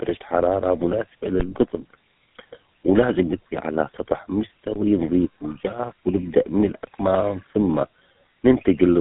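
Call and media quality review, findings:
Tandem speech coding across the full 9 s: speech decoded and re-encoded at network borders, two GSM full-rate-style coding passes with a G.711 hop between. Second coder compounds the first's errors: rough, warbly, muffled, nothing above 3.8 kHz.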